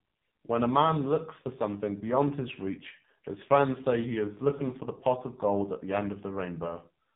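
From start to finish the speech sounds buzzy, thin and synthetic, with no content above about 3.8 kHz, so sibilants and breathiness are missing. This is the AMR narrowband mobile codec at heavy damage. The voice is rebuilt from a vocal-tract model driven by a sparse pulse excitation in 20 ms frames, at 8 kHz sampling. The strong buzz points to one of the lowest AMR-NB modes, around 5 kbps.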